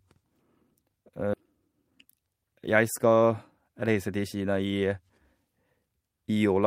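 At 1.33 to 1.35 s the speech has a skip ahead: roughly 0.7 s of audio was discarded while later packets were already queued, so playback jumps straight to the later material with no filler, and the two sides butt together abruptly.

Two jitter buffer speed-up passages follow, from 1.66 to 3.28 s at 110% speed and from 3.68 to 4.24 s at 109%. The receiver repeatedly cut short pitch-period pieces to drain excess buffered delay, removing roughly 150 ms and 70 ms. The speech sounds hurried at unchanged pitch.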